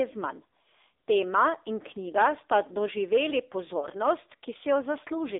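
A speech recording that sounds thin, buzzy and synthetic throughout, confined to roughly 300 Hz to 3.7 kHz: the AMR narrowband mobile codec at a low rate consistent with 7.4 kbps, modelling the voice with few pulses. Between 3.80 and 3.88 s a brief dip or warble points to one lost AMR speech frame, concealed by reusing the previous frame's settings at reduced gain.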